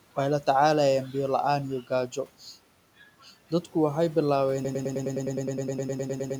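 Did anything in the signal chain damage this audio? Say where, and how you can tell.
Yes. After "waxay bilawen", from 4.65 s a 0.10 s fragment repeats 17 times to the end: a broken-record loop, likely from a stalled playback buffer.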